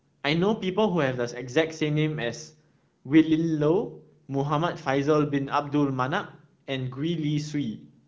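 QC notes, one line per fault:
Nothing to flag in this one; the speech comes over an AMR wideband (HD Voice) link at a rate that fits 15.85 kbit/s, and the light coding texture you'd expect from that path is all there is to hear.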